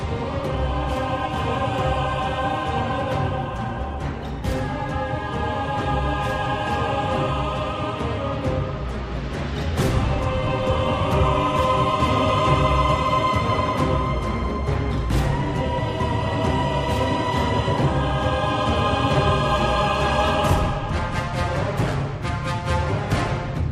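No technical faults are audible.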